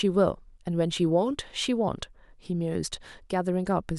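Listening to the speech in this clip, nothing stood out as a technical problem.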